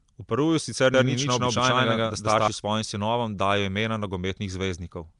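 From start to finish the speech has a rough, hissy fringe and a smeared, underwater texture, with nothing above 10.6 kHz. This is likely Nellymoser compression, the old Flash microphone codec, which fits a 44 kbps stream. It codes short blocks of audio on a small fixed bit budget, so quieter bands get no bits at all and are filled with synthetic noise. That noise fill gives the hiss, and the block coding smears the sound.

Between 0.94 and 2.48 s every syllable is followed by a second, equally loud copy about 150 ms behind, giving a slapback stutter that starts and stops abruptly. The copy is full-band and carries no decay or room colour, so it is not an acoustic echo. This is likely a doubled audio track, where the same signal was mixed in twice: once directly and once through a slower path or an out-of-step edit.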